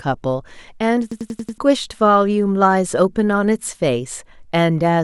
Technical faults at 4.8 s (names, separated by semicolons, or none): none